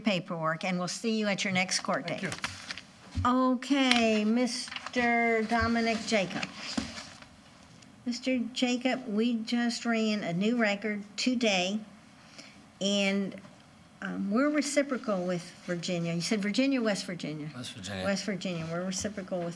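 No technical faults are audible.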